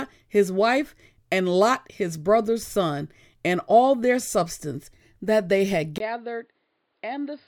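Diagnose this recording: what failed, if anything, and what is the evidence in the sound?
Input switched to a poorer device at 5.98 s, at the driver stage. After a 20 ms silence the speech drops roughly 10 dB, loses everything above 5 kHz and gains a new noise floor well below it, likely a change to another microphone or headset profile.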